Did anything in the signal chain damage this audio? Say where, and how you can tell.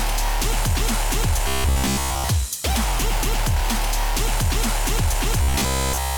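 Yes. Robotic sound from repeated short buffers occurs from 1.48 to 2.29 s and again from 5.42 to 6.17 s: a rigid, metallic buzz at 66.7 Hz, which fits a repeated block of about 15 ms. The stage is likely the driver or buffer. New audio arrived too seldom, so the last block was replayed, covering most of the first stretch and all of the second. A spectrogram shows evenly spaced harmonic lines at multiples of 66.7 Hz. The waveform shows identical 15 ms cycles.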